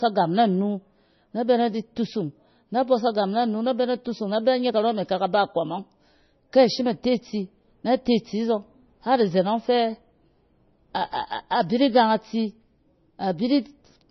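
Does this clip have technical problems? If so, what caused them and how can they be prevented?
Yes. Across the whole clip the speech sounds dull and watery, with nothing above 5.9 kHz, and this is likely heavy MP3 compression at a very low bitrate, roughly 25 kbps. Starved of bits, the encoder discards everything above a fixed cutoff and drops the quieter frequency components, which then flicker in and out between frames, giving the swirly texture and softened consonant attacks. To prevent it, record or export at a higher bitrate, such as 128 kbps or more, or use a lossless format.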